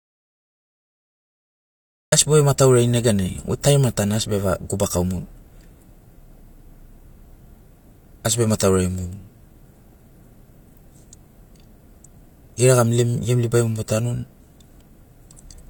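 The recording opens in an audio dropout to silence that is already under way at 0 s and runs to 2.12 s. The gap is silent, with no room tone or noise floor beneath it, and the speech then enters abruptly mid-flow. The likely cause is a lost input, such as a disconnected device, a broken link or a stray mute, while the recorder kept writing empty samples. Whatever was spoken in those first two seconds is unrecoverable.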